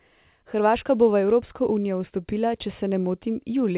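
No technical faults can be heard in this speech, which comes through a G.711 A-law call path at 64 kbps with nothing above 4 kHz, as that codec gives.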